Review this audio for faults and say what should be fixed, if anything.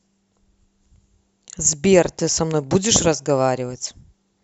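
Nothing stood out on listening to this speech recording, and there is nothing that needs fixing.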